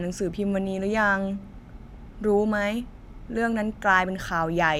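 A speech clip with DAB burbling from 1.87 to 1.95 s: a brief burst of noise blips over the speech. Weak reception lets bit errors slip past error correction into the MP2 data, corrupting sub-band samples and scale factors, which fits a bit error rate of around 0.3 percent.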